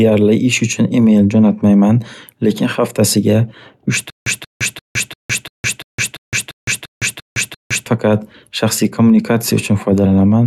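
A playback or streaming stall, most likely, kept retrying on this speech clip and replaying its last buffered fragment before running dry each time, producing a stutter with silent gaps from 4.10 to 7.86 s. The same 183 ms burst returns 11 times at an even period of 344 ms, each repeat followed by about 161 ms of dead digital silence. Whatever speech belonged in that stretch never arrives and is simply lost.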